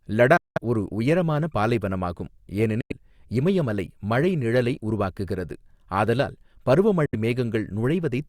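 At 0.37 s the speech cuts to silence until 0.58 s, then drops out again from 2.81 to 2.92 s and from 7.06 to 7.15 s. Each time it resumes further along, as though it kept playing unheard. This pattern is likely a Bluetooth dropout, with audio packets arriving too late at the headphones and being discarded. On a waveform each gap is a flat stretch of silence, and on a spectrogram it is a clean blank vertical band across all frequencies.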